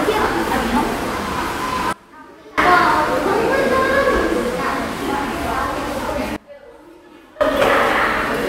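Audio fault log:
1.93–2.58 s and 6.36–7.41 s, sudden gain jump: the level drops abruptly by about 24 dB with no fade, the background noise falling with it, then snaps back at each span's end. This is likely a digital gain change applied between adjacent samples without a ramp.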